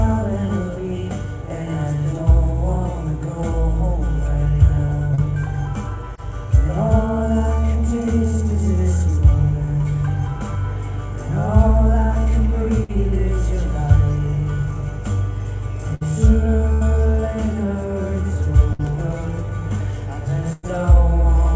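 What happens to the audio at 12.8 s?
A burst of packet loss runs from 12.84 to 12.91 s. Several consecutive packets failed to arrive in time, so the receiver filled about 51 ms by extending the last sound it had and fading it down. That is heard as a brief held buzz or hiss that dies away. Playback then picks up with about 40 ms of the original audio skipped. The G.722 call path's limit of nothing above 8 kHz stays the same across the gap.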